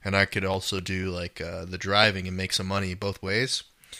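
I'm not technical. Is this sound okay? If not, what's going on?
No. The recording shows periodic USB or driver dropouts: something in the computer kept briefly blocking the audio connection about every quarter of a second, and each time a tiny sliver of sound, well under a millisecond, was simply skipped. You hear this as a steady ticking running under the speech from about 0.29 s, just after "and I", to about 3.78 s, roughly fifteen small clicks evenly spaced, audible only where there is sound.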